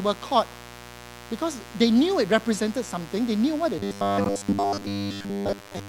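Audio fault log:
throughout, mains buzz: A steady, raspy buzz sits under the speech for the whole clip. It is built on a 60 Hz mains fundamental. Sharp switching spikes, twice per mains cycle, add a dense stack of harmonics that climbs into the kilohertz range. That is why it rasps rather than hums. It runs at about 20 dB below the speech. A dimmer, a rectifier or a missing shield would let such spikes into the signal path.
3.79 to 5.89 s, robotic sound from repeated short buffers: Right after "something they knew what", the speech turns rigid and metallic until the end. A fixed 100 Hz buzz is imposed on it. That rate points to a repeated chunk about 10 ms long. The likely cause is that new audio arrived too seldom, so the last short buffer was replayed to fill time. Most of the real audio in this stretch is skipped. The speech still follows its shape only roughly.
4.24 s, gap between stream segments: A hard-edged hole of about 15 ms cuts into the sound here. 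The time stamps of two stream segments, each 6.0 s long, do not meet. The player fills the space between them with silence. Nothing is lost. The gap only adds time. It falls inside the robotic stretch, so the buzzy sound stops abruptly and then resumes.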